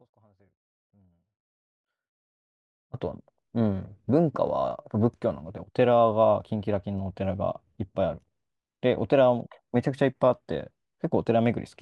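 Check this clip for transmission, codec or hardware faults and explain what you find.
One fault: an audio dropout to a faint residue from the start until 2.94 s, where the speech snaps back abruptly. A likely signal-path interruption leaves only a faint leak roughly 30 dB down, a thin waveform and pale spectrogram before a sharp edge.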